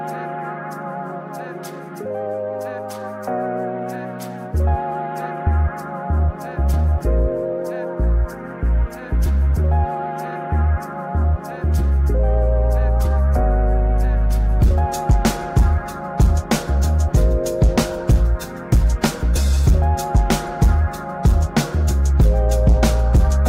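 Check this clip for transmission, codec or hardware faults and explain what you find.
Nothing here stands out as a fault; the sound carries on steadily with no breaks, glitches or damage to point to.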